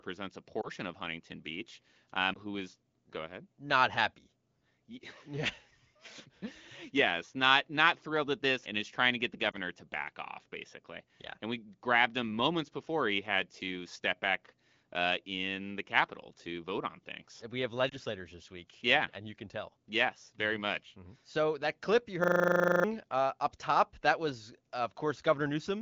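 Four brief dips in the speech at 0.62 s, 2.33 s (just before "who is go ahead"), 9.51 s and 17.89 s are lost AMR speech frames. In each case a single 20 ms frame failed its check. The AMR-WB decoder bridged the gap by reusing the previous frame's pitch and vocal tract settings at reduced gain. The result is a short warble or softening lasting well under a tenth of a second, followed by a slightly weak onset as normal decoding resumes. The light, clean wideband coding around these points fits one of the higher AMR-WB rates.

From 22.24 to 22.84 s, between "that clip you" and "uh up top that", a system hang loop takes over. The host or driver stalled while the audio hardware kept replaying its ring buffer. One 40 ms slice repeats about fifteen times, producing a rigid 25 Hz buzzing stutter. Roughly 0.7 s of the original speech is lost behind it.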